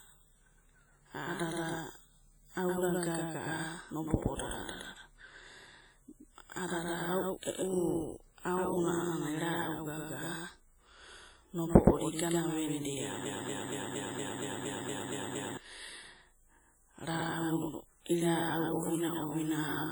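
From the start and through the whole clip, the speech carries a doubled audio track: a second full-band copy about 5 dB quieter, trailing by roughly a tenth of a second. It is likely a second capture path or an edit leaving two copies out of step. Unlike a room echo or reverb, this copy has no decay and no added room colour. It is one clean repeat at a fixed lag, so every consonant gets a crisp slapback shadow rather than a fading tail.

Also throughout, heavy WMA compression is audible. The codec's long transform blocks spread quantisation noise over tens of milliseconds around each sound, giving a ringing, washy texture and a hiss that swells and shrinks with the speech. Weak spectral detail has been zeroed out, which points to a low bitrate of around 32 kbps. This damage is likely a simple WMA encoder. What separates it from plain broadband noise is that the hiss breathes with the signal instead of sitting at a steady level.

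From 13.25 s to 15.57 s comes a broken-record loop. A fragment 233 ms long plays back to back, exactly the same each time, ten times over, and the speech that belonged in those 2.3 seconds never arrives. The likely cause is a player, encoder or stream that stalled and kept resending the last piece it held. Unlike a stutter or dropout, every repeat is identical and the rhythm is perfectly regular.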